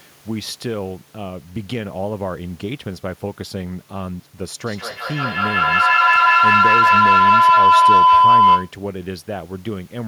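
From 4.66 s to 8.78 s a feedback howl rises out of the speech. Sound from a loudspeaker is being picked up again by a microphone on the same call and gains level each trip. It narrows to a tone near 1 kHz, peaking about 14 dB above the speech, and pulses about every fifth of a second. Unlike an echo, which fades with each repeat, it keeps growing until cut off. The faint room noise stays well beneath it.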